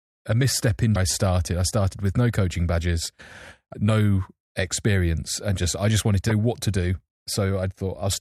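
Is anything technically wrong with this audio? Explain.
Yes. The speech has damaged data in a compressed stream at three points: 0.93–0.96 s, after "a misstep" and before "I started I started"; 3.71–3.74 s, just before "no experience and just"; and 6.28–6.32 s, after "just I just wanted". Corrupted bytes make the decoder misread those frames and lose sync until it finds the next valid header, so each spot is a brief, roughly 35–40 ms chirp or blip.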